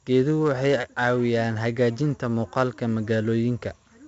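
From start to finish, the speech carries 4-bit ADPCM compression, and the damage is heavy. Each sample was coded as a small step from a predicted value. The step size adapts but lags behind sudden changes. The result is a gritty hiss riding on every loud passage, rising and falling with the level. Sharp onsets sound rough and distorted. Nothing reaches above 7.8 kHz, so the sound is dull. This points to a low sample rate, and fits about 64 kbps.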